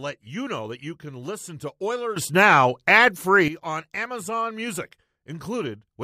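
At 2.16 s the speech and its background noise jump together by about 12 dB in a single step, then drop back at 3.48 s: a sudden gain jump, likely a gain setting applied without a ramp. Unlike AGC pumping, there is no gradual attack or release.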